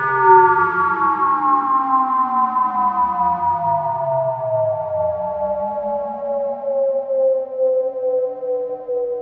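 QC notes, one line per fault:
The sound carries only the normal signature of a call chain, with the microphone processing's high-pass trimming the lowest bass and the call codec holding the content to 8 kHz and below, and no fault is present.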